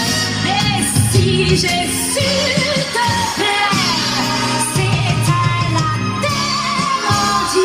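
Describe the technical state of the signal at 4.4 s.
At 4.4 s the signal is inside a call bitrate drop running from 2.37 to 4.57 s, near its end. The sound points to the encoder being told to fall from around 64 kbps to about 20 kbps after the bandwidth estimate dropped, and it stays at that floor for about 2.1 s. With so few bits, Opus quantises coarsely and trims the high frequencies, so the audio here sounds rough, watery or muffled until the rate recovers just after 4.57 s.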